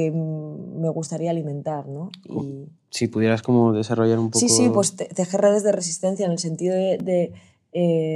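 At 7.00 s a block of digital silence of about 2.6 ms cuts in: most likely the output buffer went unfilled in time, so the sound cut out. The abrupt edges make a single sharp tick rather than an audible hole, unlike a faded dropout.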